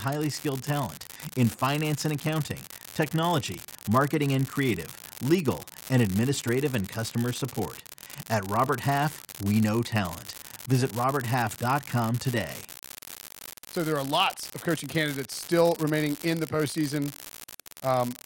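An unreliable data bit runs through the whole speech clip, from start to finish. One line in the data path is marginal, so in a random share of samples that bit comes out wrong, and each error adds a spike of identical size, about -16 dBFS. Because the errors do not depend on the signal, they form a steady crackle or fizz that continues through the pauses between phrases as well as under the speech.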